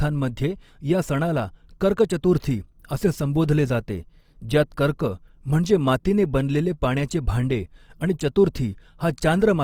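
A speech clip with plainly audible Opus compression all the way through: the voice sounds grainy, rough and noisy, likely from music-mode encoding at a low bitrate around 24 kbps, though the band still reaches about 20.2 kHz.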